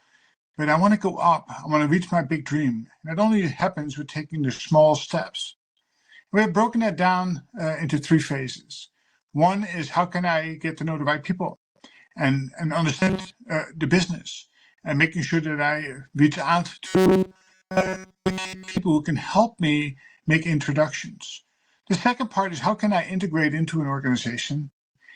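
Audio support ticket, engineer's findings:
Burst of packet loss, 4.54 to 4.62 s: about 50 ms of concealment holding the last sound and fading, then about 40 ms skipped. Waveform shows a decaying flat stretch; the spectrogram smears into a blur before a hard resume.

Robotic sound from repeated short buffers, 12.99 to 13.31 s and 16.87 to 18.78 s: a rigid metallic 188 Hz buzz, likely from the receiver looping a roughly 5 ms buffer. Most of the first span is repeated, and all of the second. The spectrogram shows flat, evenly spaced harmonic lines.

Jitter buffer speed-up, 22.70 to 23.26 s: playback runs at 106% speed with unchanged pitch as the receiver drops roughly 40 ms of pitch periods to trim excess buffering. The waveform looks compressed in time, with no spectral shift.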